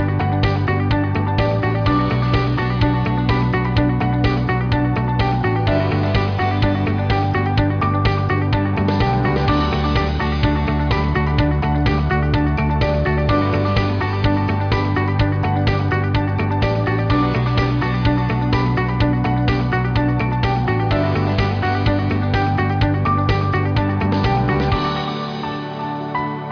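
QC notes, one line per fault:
No faults heard; nothing to log.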